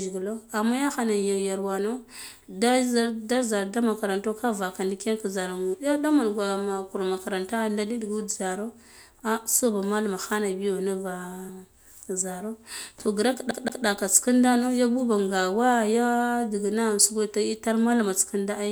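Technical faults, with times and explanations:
5.73–5.75 s and 11.48–11.50 s, compressed frames skipped: at both points the audio jumps forward, losing roughly 70 ms the first time and roughly 100 ms the second. That fits a few whole compressed frames going missing or being rejected by the decoder as damaged.
13.51–13.86 s, CD stuck on one turn: right after "to grak" a slice of about 175 ms plays twice, with a brief mute at each jump back, before things carry on into "nda nuv ya buba". That's the classic skipping-disc stutter, where a scratch knocks the laser back one track at the same spot each revolution. The loop length matches one turn, which gives it that quick, evenly spaced repeat.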